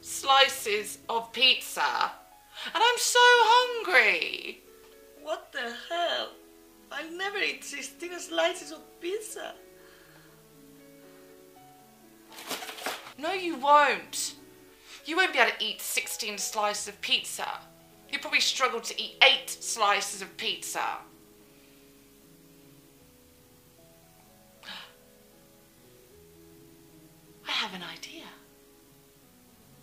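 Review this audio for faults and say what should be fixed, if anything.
No faults were found, so nothing needs fixing.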